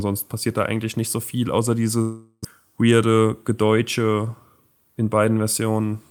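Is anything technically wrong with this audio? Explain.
Yes. From 2.01 to 2.47 s the speech turns into a fading buzz, drops to near silence for about 60 ms, then resumes with roughly 400 ms of the speech missing. This is likely a long network dropout, where the receiver extended the last sound before giving up.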